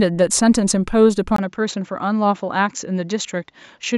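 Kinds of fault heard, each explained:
Input switched to a poorer device: at 1.36 s, a 20 ms gap, then duller, slightly quieter speech with nothing above 7.6 kHz, likely from another microphone taking over.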